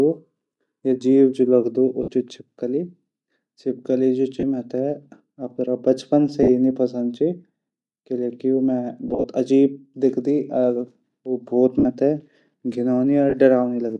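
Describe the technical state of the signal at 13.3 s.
At 13.30 to 13.34 s, about 30 ms, lost LE Audio frames interrupt the speech, which fits three dropped 10 ms frames. The decoder repeats the last spectrum with randomised phase, so the sound turns into a brief noisy smear. On a spectrogram, harmonic striations give way to a diffuse block. In the waveform, periodic cycles become irregular noise.

Across this moment the speech also has a plainly audible breathy, grainy edge, most likely from Bluetooth LC3 compression at a rate that suggests about 48 kbps. Sparse upper bands get noise-filled. A spectrogram would show speckled, unstructured high-frequency texture instead of clean harmonics.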